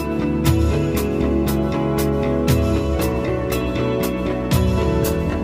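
Nothing in the audio stood out as a technical problem on listening.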